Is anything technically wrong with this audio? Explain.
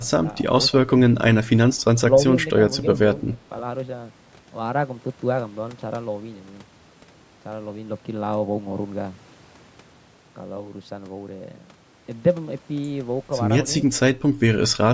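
Yes. Speech suppressed in double talk appears at 0.06–0.25 s, 0.71–0.91 s, 1.7–1.75 s and 3.21–3.41 s. The voice ducks by about 10 to 15 dB in short bites, likely where an echo canceller mistook overlapping talk for echo. Unlike a network dropout, the voice dips rather than vanishing cleanly.

An echo leak sits at 1.8–1.84 s. A very faint, delayed copy of the voice returns about 270 ms later, likely residue the canceller missed. It is a separate repeat, not a smeared reverb tail.

The band stops at 8 kHz, consistent with normal call microphone processing.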